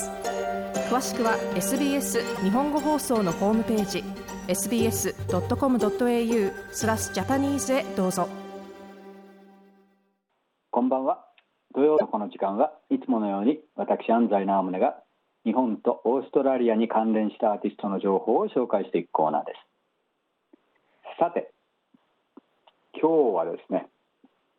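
Damaged data in the compressed stream, from 2.35 to 2.38 s and again from 11.94 to 12.02 s, corrupts frames that the decoder then misreads or rejects. It loses sync while it hunts for the next valid frame header, and each spot comes out as a brief chirp or blip.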